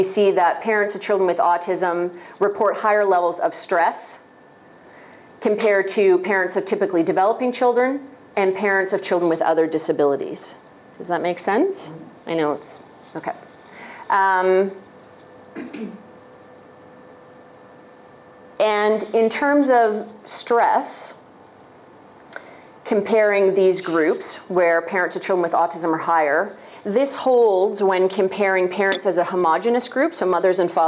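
Nothing in this audio stood out as a technical problem on listening.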